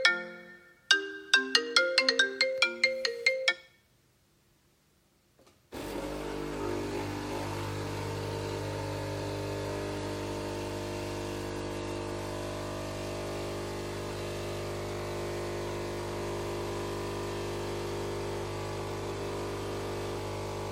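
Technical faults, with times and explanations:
Nothing in the audio stood out as a technical problem on listening.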